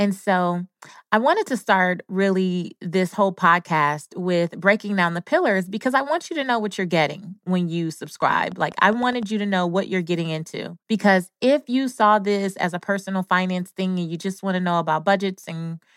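Interference from nearby equipment, or a faulty connection or power supply, is the likely source of a train of clicks from 8.22 to 9.24 s. For about a second, something injects a sharp pulse into the signal at a steady rate of almost 10 per second, around ten clicks in all. Each one has much the same shape and reaches about the level of the speech itself, so the ticking is clearly audible over the talking and through any gap in it.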